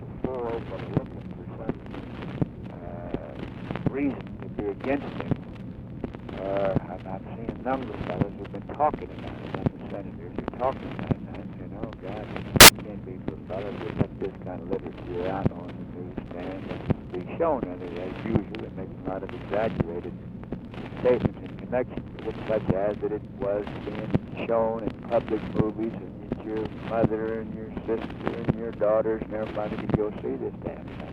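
At 12.61 to 12.69 s there's a burst of loud, harsh broadband noise: samples built from the wrong bytes, so the jittery low bits land where the big values belong.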